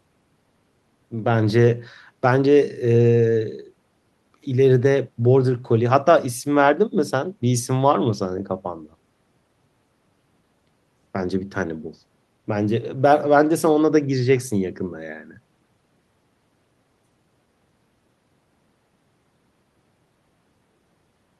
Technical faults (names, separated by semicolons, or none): none